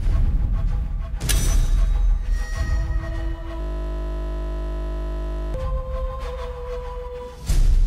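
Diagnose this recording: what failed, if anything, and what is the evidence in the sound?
The driver or buffer stage failed with a system hang loop. From 3.61 to 5.54 s the audio collapses into a steady 50 Hz buzz. A single 20 ms slice repeats nearly a hundred times because the machine froze while the hardware kept replaying the same short ring buffer.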